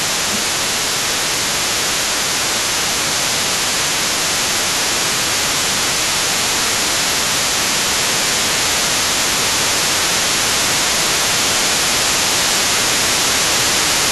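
From the very start and right through to the end, the other side's voice is leaking through underneath, roughly 15 dB below the talker, likely residual loudspeaker echo the canceller didn't fully remove. On top of that, speech gets suppressed in double talk at 0.0 to 1.58 s, 2.01 to 4.41 s, 5.11 to 6.41 s, 7.02 to 8.5 s, 9.22 to 12.01 s and 12.57 to 13.79 s. The talker dips by up to about 15 dB while both voices overlap, likely because the canceller pulls everything down when it can't separate them.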